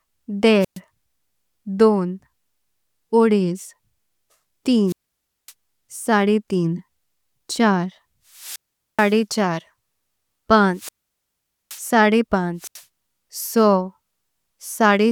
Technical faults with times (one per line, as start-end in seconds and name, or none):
0.60-0.79 wireless microphone squelch dropout
4.86-5.53 wireless microphone squelch dropout
8.30-9.21 wireless microphone squelch dropout
10.73-11.86 wireless microphone squelch dropout
12.58-12.84 wireless microphone squelch dropout